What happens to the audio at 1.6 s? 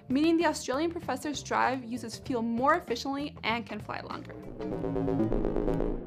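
At 1.6 s the audio falls within a run of periodic USB or driver dropouts lasting from 0.24 to 5.74 s. Every 0.5 s a brief stall drops a fraction of a millisecond to silence, giving a tick that sounds only under signal. Its strict regularity separates it from random clicks.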